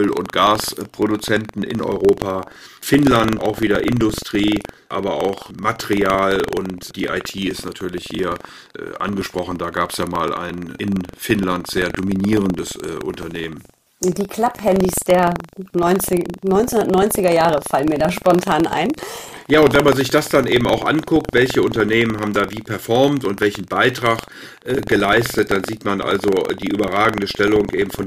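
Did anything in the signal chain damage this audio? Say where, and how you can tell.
Yes. The damage is at the driver or buffer stage, as buffer tearing. A steady 23.4 Hz rattle runs through the whole clip, but only while speech is present. That rate fits a 2048-sample buffer. Writer and reader cross each period, splicing in a small sliver of audio from about 150 ms earlier.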